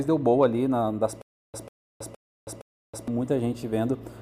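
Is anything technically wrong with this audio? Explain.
Yes. From 1.22 to 3.08 s there is a stutter with silent gaps: a 144 ms fragment repeats four times, each followed by 322 ms of digital silence, cycling every 465 ms. This is likely a stalled playback buffer replaying its last chunk on each retry, so the intervening audio is lost.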